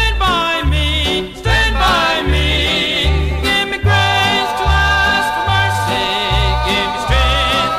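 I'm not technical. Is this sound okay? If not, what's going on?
No, not quite. Throughout the clip there's hard clipping. The sound was pushed a bit louder than the recording chain could handle, so whenever it peaks, the very tops of the waveform get sliced off flat. Only a small fraction of the sound actually hits that ceiling, so it isn't a constant fuzz. Instead, listen for a gritty crackle or edge that pops up on the loudest moments, then disappears on quieter ones.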